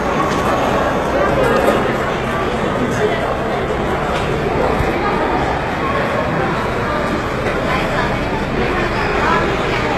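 Throughout, the treble sounds bright but gritty and metallic, with nothing above 12.3 kHz. This is likely HE-AAC compression: only the lower spectrum is coded and the top is copied up from it, so the upper harmonics don't align. The damage fits a bitrate around 16 kbps.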